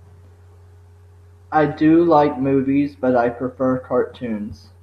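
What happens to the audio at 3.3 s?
Nothing goes wrong at 3.3 s; the speech carries on intact through that moment, with no dropout, click or distortion to be heard.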